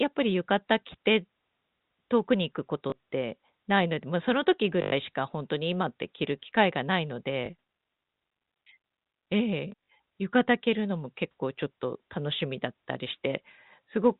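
Speech over a G.711 telephone path, band-limited at 4 kHz, with packet loss with last packet repeated at 2.9 s, 4.82 to 4.92 s, 7.46 s and around 9.72 s. Each gap is filled by replaying the preceding 20 ms block. The 100 ms run buzzes at 50 Hz. The waveform shows identical repeated segments, and the spectrogram shows banded harmonics.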